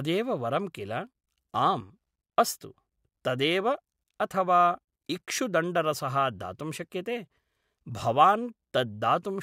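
No technical faults can be heard anywhere in this recording.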